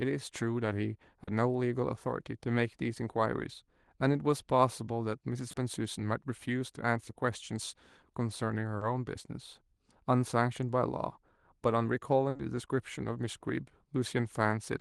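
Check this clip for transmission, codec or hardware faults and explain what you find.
A handful of transmission dropouts show up: four short concealed packet losses and one burst of packet loss, all heard through a call codec whose top end stops around 12 kHz.

The short concealed packet losses land at 1.23–1.29 s, 5.51–5.55 s, 8.77–8.83 s and 12.37–12.41 s. Each time, 20 to 40 ms of audio arrived too late, so the receiver stretched the preceding sound to cover it and then crossfaded back. You hear a quick smear or wobble in the speech.

The burst of packet loss sits at 12.29–12.37 s, running straight into the last short loss. About 60 ms went missing in a row, and the decoder kept extending the last sound while fading it down. That gives a brief held buzz or fading hiss before the speech picks up again with that stretch gone.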